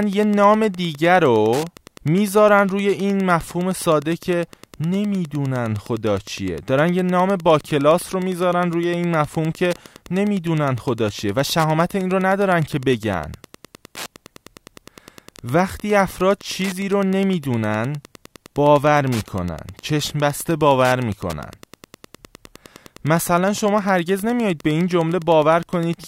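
From start to finish there's a steady ticking under the speech, about ten clicks a second, spaced at 102.4 ms. That's Wi-Fi interference: a Wi-Fi radio sitting close to the audio circuit sends its beacon at that interval, and the circuit rectifies each burst into an audible tick. It sits a good way below the speech, something like 25 dB down.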